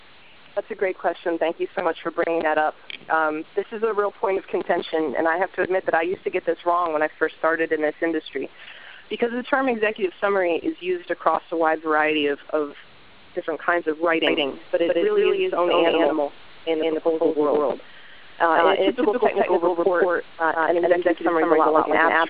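A doubled audio track begins abruptly at 14.27 s and runs to the end: a second, equally loud full-band copy trails by around 150 ms, with no decay or room colour. It likely comes from a slower capture path recording the same audio again.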